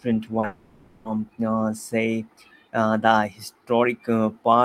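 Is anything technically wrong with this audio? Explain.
Yes. This speech recording has two transmission faults, back to back near the start.

At 0.39 to 0.45 s there is a short concealed packet loss. About 40 ms of audio failed to reach the decoder in time, and the receiver bridged the gap by extending the preceding sound, pitched if voiced or as shaped noise if not, before crossfading back into real audio. It is heard as a brief smear or wobble.

From 0.45 to 1.07 s the sound turns into a synthetic buzzy, hissy continuation of the last sound. It fades away over the stretch, never reaching true silence. Normal audio resumes at 1.07 s, but roughly 600 ms of content is missing. This is likely a long network dropout, in which the receiver's concealment filled the entire gap because no real audio arrived.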